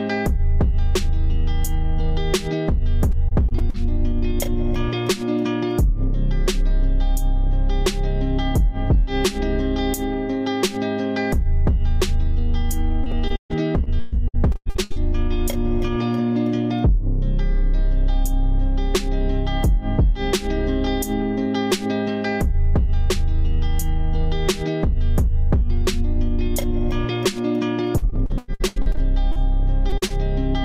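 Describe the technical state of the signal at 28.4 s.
At 28.4 s the signal is inside a stretch of repeated packet loss running from 27.98 to 29.38 s. Short gaps, the longest about 99 ms, are patched by extending the preceding sound, covering about a third of the span and giving choppy, robotic-sounding audio.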